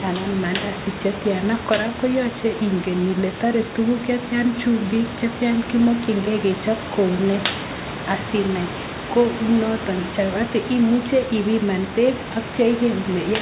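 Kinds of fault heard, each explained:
No faults can be heard in this speech clip.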